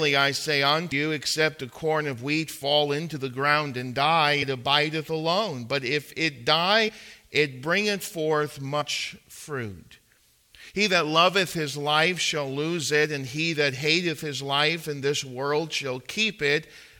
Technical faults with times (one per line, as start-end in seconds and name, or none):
0.91 compressed frames skipped
6.88-6.90 compressed frames skipped
8.80-8.82 compressed frames skipped